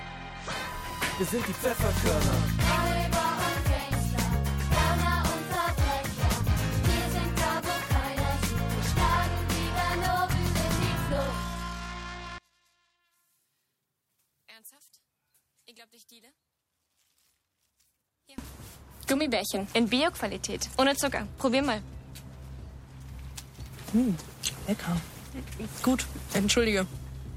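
From 12.38 s to 18.38 s the sound suddenly collapses by about 28 dB to a faint residue, then returns at full strength. This six-second stretch most likely comes from one channel inverted: with one side's polarity flipped, everything the two channels share cancels on summing, leaving only their faint difference. Unlike a dropout, a residue remains, and unlike a simple gain drop, that residue is the channels' difference rather than a quieter copy of the whole sound.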